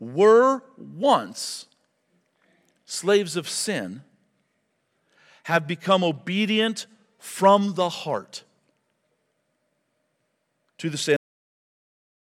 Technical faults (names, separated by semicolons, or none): cut-off end